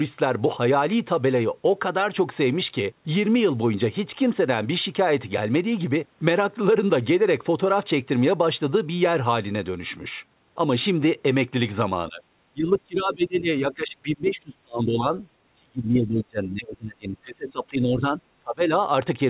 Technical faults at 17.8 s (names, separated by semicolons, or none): speech suppressed in double talk